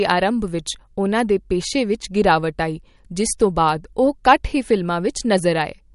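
Throughout the speech, the sound is watery and swirly, with chirpy s sounds and nothing above 11.2 kHz, likely from MP3 compression at a low bitrate around 48 kbps. A spectrogram shows a hard ceiling at 11.2 kHz and flickering holes where weak components drop out frame to frame.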